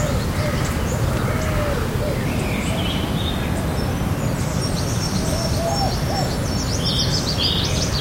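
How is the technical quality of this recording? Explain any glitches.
There's one real glitch here, a section at the wrong speed. From 2.25 s right through to the end, the audio runs 1.21 times too fast, so everything jumps up roughly three semitones and feels rushed. Likely it was played or resampled against the wrong clock, dragging pitch and tempo up together.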